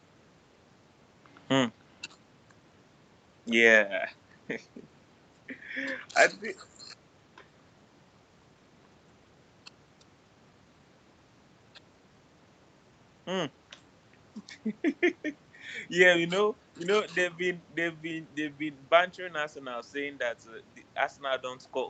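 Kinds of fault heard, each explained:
No kinds of fault are heard in this speech.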